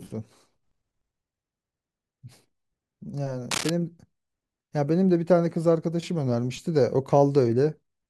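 At 3.51 s, a burst of cable scratch noise cuts across the speech for about 0.19 s, ending at 3.70 s. It sounds like rough, uneven scratching or crackle sitting fairly loud against the speech, roughly 5 dB below it. The likely cause is a worn lead or connector being moved, so its contact resistance flickers. A spectrogram shows a ragged smear of broadband energy over that stretch, and the waveform carries dense, jagged spikes.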